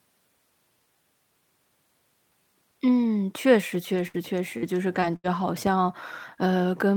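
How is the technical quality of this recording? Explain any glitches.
The recording has two clear technical faults in the second half of this speech clip: a burst of robotic dropouts followed shortly by a single pop.

From 3.95 to 5.42 s there is repeated packet loss, which gives the voice a robotic sound. Four short holes open in the audio, the longest 77 ms, with about 200 ms missing in total. Each one is patched by stretching the sound just before it, so the voice turns choppy and robotic over roughly a seventh of that stretch. Unlike a single dropout, the holes keep recurring close together.

At 5.67 to 5.69 s a loud pop lands on top of the speech, peaking roughly 10 dB above it, while the voice carries on underneath without a break. It is most likely a sudden voltage step from a plug, switch, static discharge or driver glitch, shaped briefly by the circuitry downstream. Unlike the packet loss, nothing is removed from the audio; something sharp is added to it.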